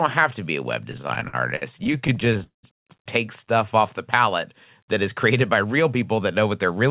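It's a speech clip, and between 0.92 and 2.65 s it hits repeated stalls (stutter): the jitter buffer keeps running dry, so the receiver stretches and fades the last sound until packets catch up. There are a couple dozen hiccups, the longest about 194 ms, covering roughly a third of that stretch. Nothing's actually lost, it just drags. The call path's narrowband tone, with nothing above 4 kHz, fits G.711 at 64 kbps.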